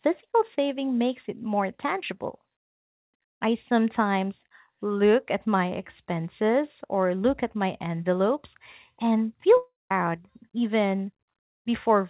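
A speech recording, heard through a narrowband call path with nothing above 4 kHz, which fits G.711 mu-law at 64 kbps. Just after "my envelopes and feel", from 9.57 to 9.91 s, the audio breaks off. The last sound is stretched into a fading buzz, then about 190 ms of near silence follows. Roughly a third of a second of speech never returns. This is likely a long network dropout, with the receiver concealing the gap before resuming further on.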